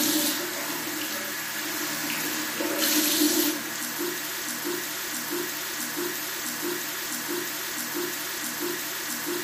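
At 4.42 s a broken-record loop begins: a 0.66 s fragment repeats exactly, back to back, eight times until the end, and the audio due in that span is lost. A stalled player or stream resending its last buffer is the likely cause. Unlike an echo, the repeats never fade.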